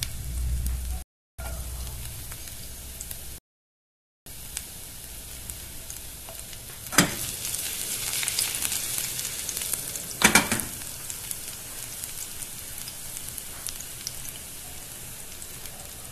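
Two rebuffering stalls interrupt the audio: from 1.02 to 1.39 s and from 3.38 to 4.26 s. At each, the player exhausts its downloaded data and falls silent, then resumes exactly where it stopped. No sound is lost, but about 0.36 s and 0.88 s are added.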